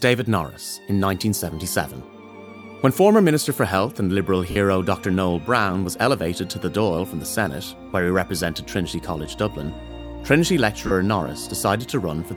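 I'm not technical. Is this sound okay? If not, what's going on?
No. There are two brief lost LE Audio frames: from 4.51 to 4.56 s (about 50 ms, which fits five 10 ms frames going missing) and from 10.87 to 10.91 s (40 ms). The wireless link dropped a little data, and the receiving earbud or speaker filled the gap by replaying the last bit of sound with its details scrambled. So instead of a clean gap of silence or a sharp click, you hear a short, hissy smear where the sound should be.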